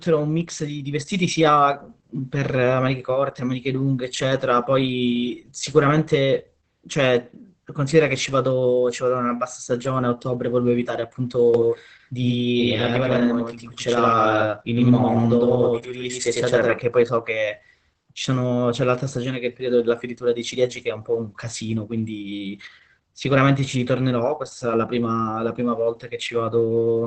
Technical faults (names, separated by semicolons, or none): Opus voice compression; doubled audio track